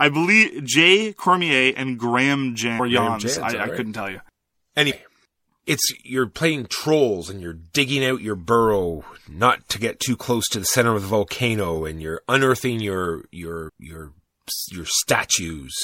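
Throughout the speech there is a watery, swirly dulling with smeared consonants, most likely MP3 compression at a low bitrate, something near 64 kbps. This is a steady codec texture, not intermittent damage. Compressed frames skipped at 2.79 s, 4.90 s and 13.68 s, just after "and you're unearthing your". Each time the speech jumps ahead, by about half a second, a tenth of a second and under half a second respectively, in whole multiples of a 26.1 ms frame. Overlapping frames blur each join into a brief soft blip rather than a hard click or a silent gap.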